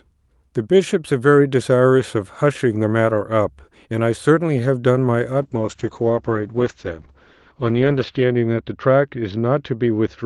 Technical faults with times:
5.44-10.26 call bitrate drop

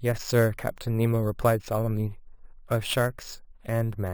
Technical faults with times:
0.00-4.14 imaging from sample-and-hold upsampling

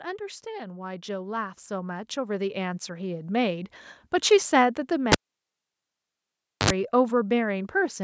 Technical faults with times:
0.43-3.83 automatic gain rising
5.12-6.70 cable pulled and plugged in

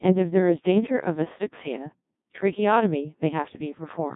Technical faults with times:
0.00-4.16 Codec 2 vocoder

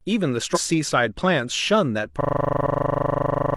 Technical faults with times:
0.51-0.58 damaged data in a compressed stream
2.21-3.57 system hang loop
2.60-2.65 damaged data in a compressed stream

